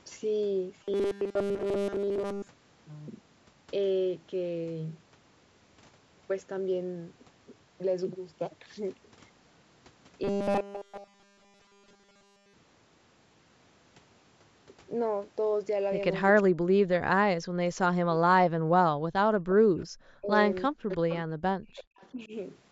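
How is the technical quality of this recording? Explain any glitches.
Quality is rough in places: two robotic stretches early on, then a busy patch from about 16 s where echo-cancellation problems pile up. The lowest bass is trimmed, as you'd expect from call processing.

From 0.84 to 2.48 s and again from 10.24 to 12.54 s, there's robotic sound from repeated short buffers. Basically the whole stretch becomes a metallic 200 Hz buzz loosely tracking the speech. That's likely the software looping a tiny chunk of audio while fresh data fails to arrive, which fits a 5 ms buffer.

Speech suppressed in double talk shows up from 16.32 to 18.64 s, at 20.20 to 20.31 s, from 20.69 to 21.95 s, and at 22.12 to 22.32 s. The voice sinks by about 40 dB in the long ones, about 20 and 10 dB in the short ones. Likely the echo canceller couldn't tell near speech from far-end echo, so it ducked everything.

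From 18.97 to 19.13 s the background is gated by the echo canceller. The room tone drops by about 19 dB for roughly 150 ms while the canceller clamps the mic against loudspeaker output, then comes straight back.

There's also some echo leak at 19.79 to 19.85, 20.91 to 21.15 and 21.97 to 22.08 s. These are faint scraps of voice trailing 361 ms behind, about 35 dB down (about 25 dB in the middle one). That's likely residue the far end's canceller didn't fully scrub from its speaker pickup.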